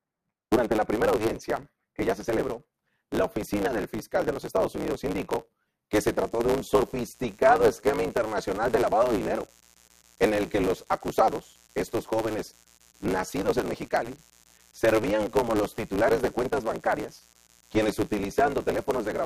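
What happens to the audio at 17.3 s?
At 17.3 s the speech carries a steady, raspy mains buzz, about 35 dB below the voice. It began at 6.21 s, just after "indicó que se", and runs to the end. Sharp switching spikes at 50 Hz leak in twice per cycle, spreading harmonics up to several kHz.

Throughout the clip, including this moment, there is also a 109 Hz buzz and speech running 1.16 times fast with its timbre kept. This is a block size mismatch (truncated). The sound fits a stage writing 512-sample blocks into one that reads fewer, so each block's end is discarded.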